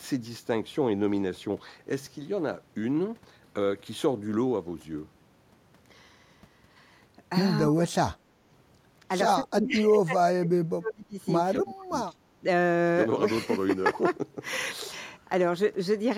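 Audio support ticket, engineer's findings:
Speech suppressed in double talk at 7.67–7.98 s, 9.38–11.17 s (most of that span) and 11.53–12.11 s; speech level dips as deep as roughly 30 dB. Likely the echo canceller muting near-end speech during far-end activity. Waveform shows envelope notches; spectrogram shows energy gaps across bands.

Background gated by the echo canceller at 8.26–8.44 s; room sound drops about 10 dB, then recovers. The canceller clamps the microphone while loudspeaker output plays. Waveform shows a brief noise-floor step down; spectrogram shows a short, uniformly darker band.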